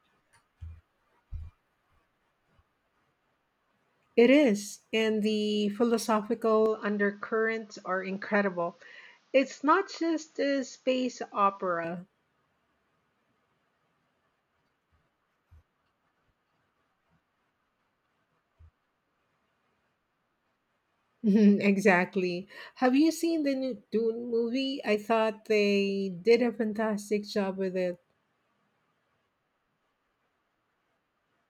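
Speech recording where, from 6.66 s to 11.85 s, the sound abruptly goes dull and a few dB quieter, with nothing above 7.2 kHz and a faint new background noise sitting well under the voice. It jumps straight in and back out with no gap at either edge. That's most likely the input switched to a poorer device for those five seconds, a narrower-band mic with its own tone, level and noise floor, before returning to the original one.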